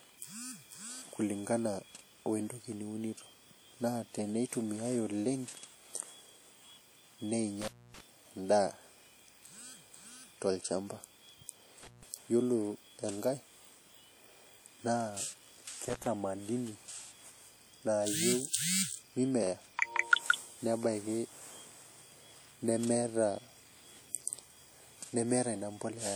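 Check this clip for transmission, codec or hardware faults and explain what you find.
There are two problems here: codec damage across the whole speech clip, and three short connection breaks.

Throughout, the sound is ringing and washy, with hiss breathing along with the signal, likely WMA compression at a low bitrate, around 48 kbps, smearing quantisation noise.

At 7.61–8.01 s, 11.83–12.03 s and 15.89–16.07 s there's an intermittent contact: the line opens for about 265, 154 and 71 ms, so the sound drops out or breaks up, with crackle at the edges.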